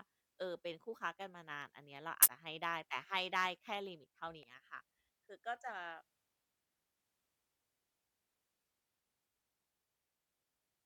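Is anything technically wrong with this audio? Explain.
Yes, there's damaged data in the compressed stream, showing up as a short glitch at 2.22–2.26 s and a tiny blip at 4.43 s in this speech. Corrupted bytes make the decoder misread those frames and lose sync, so it hunts for the next frame header.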